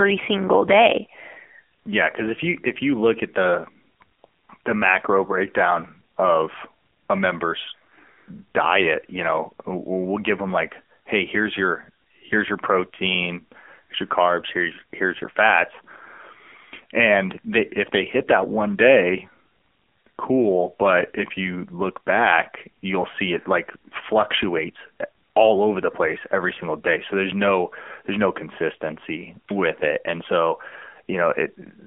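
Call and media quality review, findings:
AMR narrowband mobile codec, whole clip. Speech confined to a telephone band of roughly 250 Hz to 3.4 kHz, nothing above 3.5 kHz; thin, muffled top end. Plainly audible codec damage: buzzy, synthetic voicing from a vocal-tract model driven by sparse pulses per 5 ms. Coarseness fits a low AMR-NB mode around 7.4 kbps. Probable component: mobile leg of the call.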